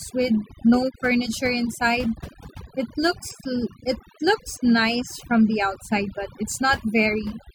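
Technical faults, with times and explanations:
Throughout: overdone noise removal, where aggressive suppression gates frequency bands near the noise floor, leaving a lowered background that breaks up into twinkling specks.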